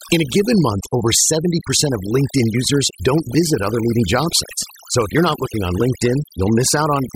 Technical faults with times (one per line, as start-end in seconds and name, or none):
0.00-7.15 overdone noise removal